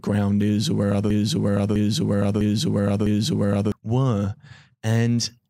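Just after "is or where other", at 1.1 s, the speech catches on a single fragment about 0.65 s long and plays it four times back to back, each pass identical, until 3.72 s. This is a broken-record loop: the audio stutters in a fixed rhythm rather than moving on, and whatever should have been said in those 2.6 seconds never arrives. The likely cause is a stall in the player, encoder or stream, which kept resending the last piece it held.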